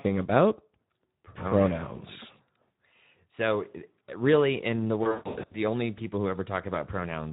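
Speex codec damage runs through the whole speech clip and is plainly audible. The coding leaves too few bits to model the excitation, so voiced sounds come out hoarse and noisy rather than clean. The degree of roughness fits a Speex encoder running at about 11 kbps.

VoIP packet loss concealed by the speech codec occurs from 5.03 s to 5.58 s, between "really in the" and "only people who". About 360 ms of audio goes missing, spread across roughly 480 ms, and the longest single gap is 140 ms. In each gap the decoder repeats its last pitch and filter at falling gain, so the sound smears into a fading buzzy tone or coloured noise. Because each frame builds on the last, the speech stays weak or distorted briefly after the packets resume.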